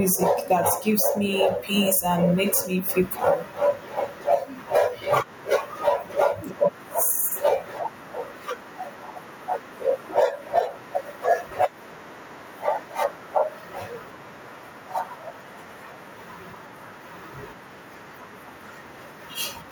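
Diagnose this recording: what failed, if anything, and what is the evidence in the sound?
Gain pumping runs through the whole recording, from start to finish. The level swings by around 10 dB as the gain is pulled down on loud speech and let back up after it. Loud and quiet passages sit unnaturally close together, giving a squashed sound. The likely cause is input gain set far too high at the microphone preamp, with a fast limiter or compressor clamping down on every peak and releasing in the gaps.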